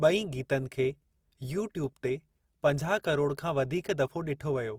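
From start to finish, the speech carries plainly audible Opus compression artefacts, likely from encoding in the codec's music (CELT) mode at a low bitrate, with the sound pointing to roughly 24 kbps. Bandwidth stays full, with content reaching about 20.4 kHz. Band energies are preserved, but starved bands are filled with folded or noise-like content, so the voice sounds grainy, rough and noisy rather than swirling or hollow.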